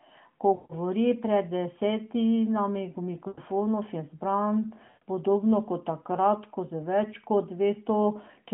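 Speech on a narrowband mobile line, cut off above about 3.4 kHz, breaks up three times from lost AMR speech frames. At 0.56, 3.28 and 4.88 s the sound smears and fades for 140, 100 and 140 ms. The decoder is repeating its last good settings with falling gain.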